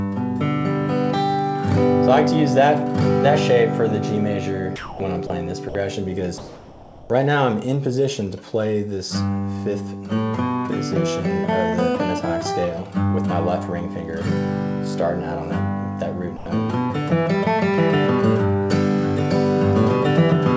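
At 4.76 to 5.00 s the sound drops out for 240 ms. Steady noise fills the gap. This is sound dropped by the voice detector, likely because the sender judged the sound to be background and stopped sending. Two shorter cuts follow, at 5.27 to 5.30 s and 5.69 to 5.75 s. Each is filled the same way. The sound returns when the detector triggers again.

From 6.38 to 7.10 s the real background gives way to a smoother synthetic noise. This is comfort noise in place of the background. The sender likely paused transmission, and the receiver generated noise shaped to match. The background here sits about 22 dB below the loud parts. The substitute is about 2 dB quieter and differs in texture.

At 16.37 to 16.46 s, 90 ms of sound is again dropped by the voice detector and replaced with noise. Across all clips, nothing is heard above 8 kHz, which fits a G.722 call codec at 64 kbps.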